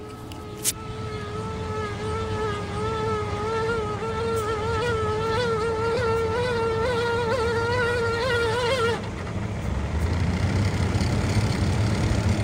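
At 5.95 to 5.97 s, Bluetooth LE Audio frames were lost: about 20 ms of audio never arrived, which fits two 10 ms LC3 frames. The decoder filled the gap by repeating the last good spectrum with its phase signs scrambled. Any tonal content in that instant smears into a brief noisy burst instead of cutting to silence. The fill is so short that it sounds like a momentary rough blip in the sound.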